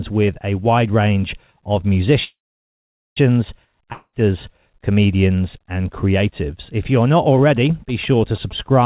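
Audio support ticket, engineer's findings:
Call audio freeze, 2.24–3.19 s: last sound stretched into a fading buzz or hiss, then roughly 0.83 s of silence. Likely jitter buffer underrun from held packets. Audio resumes exactly where it stopped, nothing lost, about 0.92 s added delay.

Long network dropout, 3.92–4.16 s: brief fading fill, 50 ms silence, then audio returns further on. Unlike the freeze, about 0.2 s of content is skipped, not delayed. Likely packets lost outright, never played.

GSM signalling bursts, 7.42 s to end: galloping dit-dit-dit of short 217 Hz buzzes, about 20 dB below the signal. Nearby 2G phone signalling, rectified in the audio circuit. Pulsed, not the steady tone of mains hum. Narrowband sound, nothing above 4 kHz, fits G.711 A-law.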